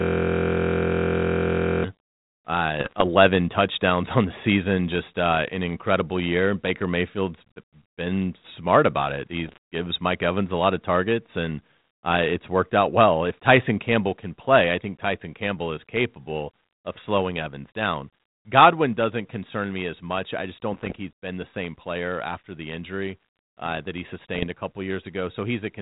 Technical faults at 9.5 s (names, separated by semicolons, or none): bit errors on an ADPCM link